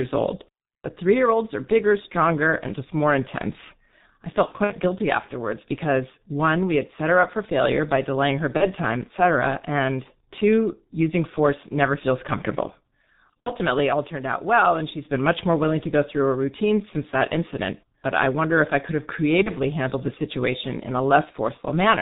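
G.723.1 codec damage runs through the entire speech clip. This early internet-telephony coder works at about 6.3 kbit/s on 30 ms frames and drops everything above 4 kHz, so the voice is heavily muffled and hoarse. Its slowly updated model of the vocal tract cannot follow fast changes, which smears consonants together.

VoIP packet loss concealed by the speech codec first appears from 4.46 to 4.75 s, where about 120 ms of audio is missing in scattered gaps over roughly 240 ms, the longest lasting 60 ms. Further dropouts follow at 8.57 to 8.68 s (30 ms lost), 13.42 to 13.53 s (60 ms) and 19.43 to 19.50 s (30 ms). These gap lengths fit whole 30 ms frames going missing. In each gap the decoder keeps repeating its last pitch and filter at falling gain, so the sound turns into a brief buzzy or noisy, fading smear. Because each frame builds on the one before, the voice stays weak and distorted for a short stretch after real audio returns.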